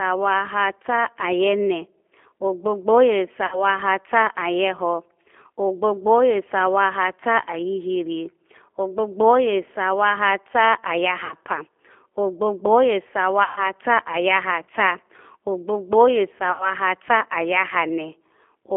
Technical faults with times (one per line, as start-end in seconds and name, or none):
0.00-18.77 G.729 codec
3.46-3.63 VoIP packet loss concealed by the speech codec
11.25-11.35 VoIP packet loss concealed by the speech codec
13.44-13.68 VoIP packet loss concealed by the speech codec
16.52-16.73 VoIP packet loss concealed by the speech codec